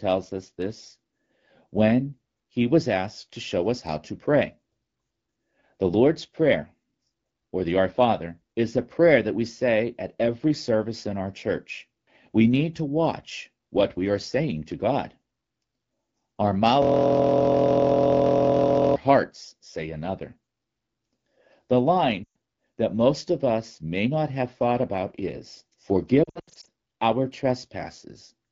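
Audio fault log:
16.82–18.96 s, system hang loop: for about 2.1 s the same 23.22 ms slice of audio repeats exactly, some 90 times, producing a steady buzz at 43.1 Hz instead of moving sound. The computer or driver stalled while the sound hardware kept replaying its ring buffer, and a loop this short fits a 1024-sample buffer. Because each pass is so brief, the repeats blur into a pitched drone rather than a stutter.
22.24–22.35 s and 26.24–26.69 s, lost AMR speech frames: the first is a single 120 ms gap, which fits six consecutive 20 ms frames. The second loses 260 ms in pieces spread over 440 ms, with no run longer than 80 ms. Frames that failed their checksum were replaced by the decoder, which reused the last good pitch and vocal-tract settings at falling gain. The speech smears and quickly fades during each gap, then returns weak and rough. On the AMR-WB path at 12.65 kbit/s, coding damage is light.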